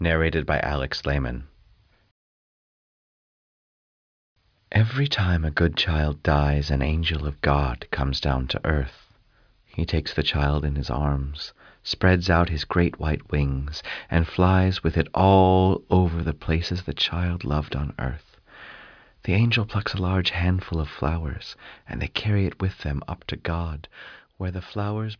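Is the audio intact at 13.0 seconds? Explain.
Yes, the audio is intact at 13.0 seconds, with no dropout, click, distortion or other fault at that moment.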